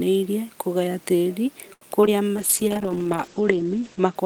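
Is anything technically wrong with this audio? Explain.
Yes, there are three kinds of network-related faults in this speech.

From 1.73 to 1.83 s, one sound is held unnaturally long, with a faint buzz or dip, before the speech resumes where it left off. This is a short stall from a late packet: the jitter buffer ran dry, so the receiver stretched about 80 ms of audio until the data arrived. Nothing is lost, but everything after it plays about 80 ms later.

At 2.01 s and again at 2.06 s there are brief smears or wobbles, each covering about 20 ms of missing speech. These are short concealed packet losses. The decoder never received those stretches, so it extended the preceding sound to fill each gap and then blended back into the real audio.

From 2.37 to 4.21 s the speech turns muffled and rough, with a watery texture. This is a call bitrate drop. The encoder was cut from 40 to 9 kbps, and for about 1.6 s it stayed at that lowest rate. 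At that rate the audio bandwidth shrank from 20 kHz to 8 kHz, which removes the upper frequencies and leaves coarser coding throughout.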